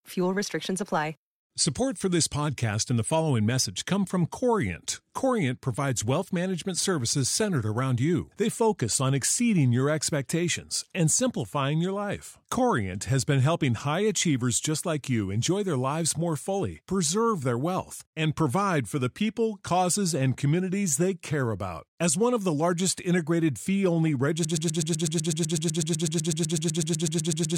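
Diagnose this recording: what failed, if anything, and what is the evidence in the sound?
After "largest integrated fee only", a 125 ms fragment repeats 25 times from 24.45 s to the end: a broken-record loop, likely a stalled playback buffer.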